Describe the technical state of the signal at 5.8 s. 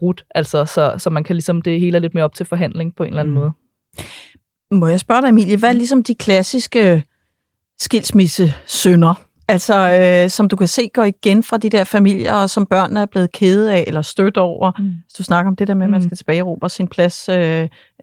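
At 5.8 s the signal is inside a stretch of channel delay (comb filtering) running from 5.67 to 7.53 s. One channel lags by about a single sample, around 0.02 ms, so the mono sum cancels only near 20 kHz, leaving a slight dulling of the extreme top.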